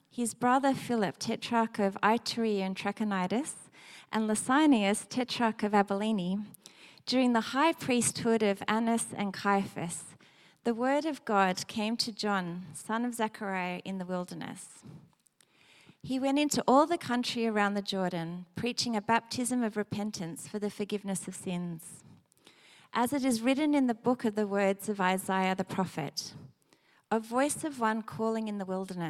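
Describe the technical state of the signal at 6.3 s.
At 6.3 s the signal is intact, with no fault audible at that moment.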